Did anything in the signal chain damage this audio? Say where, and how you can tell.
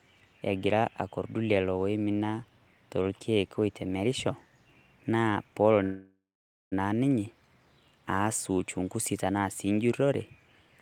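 Yes, a call audio freeze in the network stage, from 5.83 to 6.74 s, right after "naa peelo". The last sound trails off into a fading buzz, then about 0.52 s of silence, before "naa ninye" resumes where it left off. That points to packets likely held up in transit, emptying the jitter buffer.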